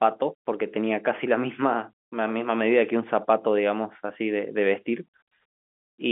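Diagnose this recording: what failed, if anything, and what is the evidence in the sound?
Nothing has failed here: the speech sits in an ordinary telephone band of roughly 200 Hz to 3.4 kHz with nothing above about 3.7 kHz, exactly what a healthy G.711 mu-law line at 64 kbps sounds like, and nothing else in the sound calls for a diagnosis.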